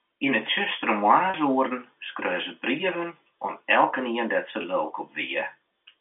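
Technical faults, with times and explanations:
1.30–1.34 s and 4.62–4.64 s, packet loss with pitch repetition: about 40 ms and 20 ms of audio dropped out, and the receiver looped the last pitch period, giving brief held, buzzy sounds.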